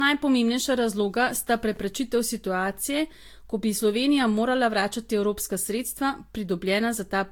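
Generation loss runs through the whole speech clip. The swirly, hollow smearing and softened consonant attacks are likely the result of about four successive lossy re-encodes, which points to Vorbis near 70 kbit/s. Each pass quantised on a shifted frame grid, stacking noise and spectral holes, with nothing above 19.3 kHz.

Chunks out of order appear at 1.74 to 1.77 s, between "razloga sta" and "situacije ko bi". A 10 ms chunk arrived two chunks late and plays after the chunks meant to follow it. The three hard joins give a brief jumbled stutter.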